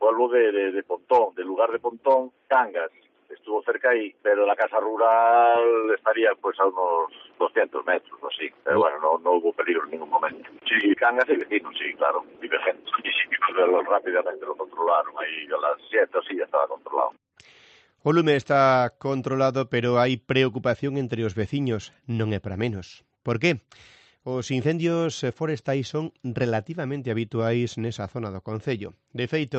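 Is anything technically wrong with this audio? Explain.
Yes, there are two faults. At 10.93 s the audio lurches forward with no gap: roughly a second and a half of material simply isn't there, and the sound on either side is butted together almost seamlessly. This is a skip ahead. The receiver discarded a stretch of audio, either lost in transit or thrown out when the jitter buffer overflowed, because newer audio was already queued. Jumping to it cut the accumulated delay by the same amount.

From 13.68 s to 14.19 s the audio briefly rushes, running at about 107% speed while keeping its pitch, so it sounds hurried for that half second. This is a jitter buffer speed-up. The buffer was holding more audio than its target, so the receiver trimmed a series of very short pieces, each one or a few pitch periods long, removing roughly 50 ms in total to bring latency back down. The clip travelled through an Opus call path limited to an 8 kHz bandwidth.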